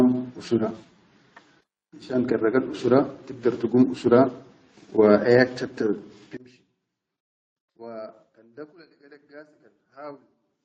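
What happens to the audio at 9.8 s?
At 9.8 s the speech has collapsed to a faint remnant about 23 dB down, from 6.37 s after "wa ayak chatta" to the end. The likely cause is one channel inverted, so the centred voice cancels. Unlike a simple level drop, what remains is only the small mismatch between the channels.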